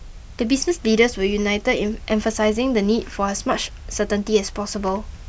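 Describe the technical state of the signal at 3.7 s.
At 3.7 s the speech signal is intact, with no audible fault at that moment.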